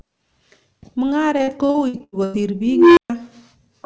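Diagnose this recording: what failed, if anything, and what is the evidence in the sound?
Network stage: repeated packet loss (robotic sound) from 1.38 to 2.36 s. The sound turns choppy as repeated dropouts, the longest about 93 ms, are patched by stretching the last audio. Roughly 39% of that stretch is concealment rather than real signal.

Processing stage: an unstable filter from 2.67 to 3.10 s. A tone around 300 Hz swells over about 0.3 s into clipping, then cuts to silence for 0.13 s. A recursive filter with bad coefficients diverged, overflowed, and output nothing until it reset.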